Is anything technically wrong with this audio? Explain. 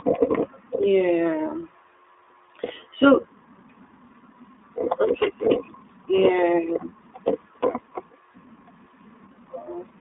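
Yes. The speech has been through the iLBC codec for its full length, and one iLBC frame is lost partway through.

The iLBC codec is present throughout. The sound is held to a telephone band of roughly 300 Hz to 3.7 kHz, with plainly audible rough, synthetic coloration. This fits the 15.2 kbps, 20 ms frame mode, where each frame's excitation is coded independently.

The lost iLBC frame occurs from 6.16 to 6.18 s. The decoder covers the roughly 20 ms gap by repeating the last pitch cycle blended with noise. This is heard as a brief buzzy, held vowel-like sound. Because frames are independent, the speech recovers immediately afterward.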